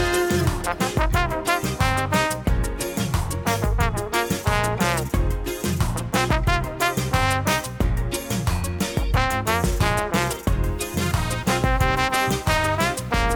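From 10.69 s to the end, the sound turns harsh and buzzy, with a gritty noise floor filling the quieter gaps. That's likely a stuck bit, one converter bit pinned so roughly half the samples jump by a step of about -50 dBFS.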